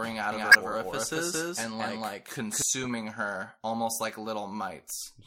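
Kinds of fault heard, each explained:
Doubled audio track, 0.32 to 2.62 s: the speech is joined by a second full-band copy trailing roughly 200 ms behind at about the same level, with no decay or room colour, likely from a second capture path, and it starts and stops abruptly.
Corrupt frame decoded, 0.51 to 0.55 s, 1.59 to 1.61 s and 2.83 to 2.90 s: damaged compressed frames were decoded anyway, scattering energy to wrong frequencies as short glitches. The first is loud, the second quieter, and the longest and faintest last seems to span several frames.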